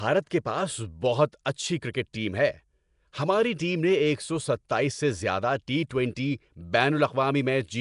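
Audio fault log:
Throughout: Nellymoser compression. The speech has a rough, hissy halo and sounds smeared and underwater. Nothing reaches above 10.6 kHz. The likely cause is the Nellymoser Asao codec. It gives weak bands no bits and fills them with noise. The damage fits about 44 kbps.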